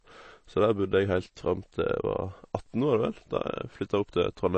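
From start to finish the speech has a hard ceiling at 8.3 kHz, with nothing above it, so s and t sounds lose their crispness. Plainly audible codec damage runs through the whole clip: a watery, swirling texture as weak frequency components flicker in and out between frames, with consonant attacks smeared. The likely cause is MP3 compression starved of bits, which fits a bitrate around 32 kbps. The encoder dropped the treble and discarded quieter detail to stay within budget.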